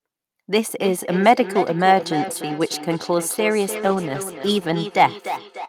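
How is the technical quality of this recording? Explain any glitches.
The recording has two clear problems: a feedback echo that runs through most of it, and a short patch of degraded audio near the end.

From 0.69 s to the end there's a feedback echo between two devices. Two devices on the same call are sitting close together, so each microphone picks up the other's speaker. Speech comes back roughly every third of a second, thinner each pass, peaking about 9 dB below the direct speech.

From 3.7 s to 4.81 s there's a call bitrate drop. The sound turns rough and muffled, with the top end gone, for about a second. That fits the encoder being squeezed from around 64 kbps down to roughly 19 kbps after the bandwidth estimate fell, before it recovers.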